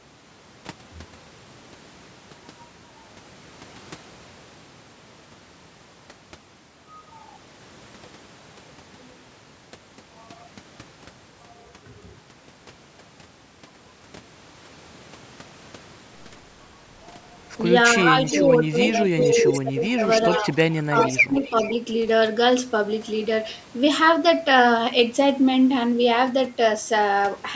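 Things go wrong around 18.1 s. From 18.12 to 18.16 s the speech dips by roughly 10 dB, a quick duck that's the first sign of speech suppressed in double talk. The likely cause is both sides talking at once, with the echo canceller unable to tell the near talker from loudspeaker echo, so it pulls everything down. It gets worse from 18.49 to 20.04 s, with drops of up to roughly 20 dB over about a second in total, and again from 20.41 to 21.63 s, at up to roughly 15 dB over about three quarters of a second. The speech sounds pumped and patchy through those stretches.

Echo leak runs alongside this. A delayed copy of the speech comes back just under 400 ms late (397 to 400 ms) at 18.26 to 18.45 s, 19.21 to 19.58 s, 20.21 to 20.40 s, 20.98 to 21.22 s and 21.39 to 21.71 s. It ranges from faint, around 20 dB down, to nearly as loud as the speech at around 5 dB down, which is most noticeable at 19.21 s and 20.98 s. 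It's likely what you get when the loudspeaker side's canceller doesn't fully scrub what its microphone picks up from the loudspeaker and sends the remainder back. Throughout the clip the call's microphone processing is also audible as a top end that stops at 8 kHz.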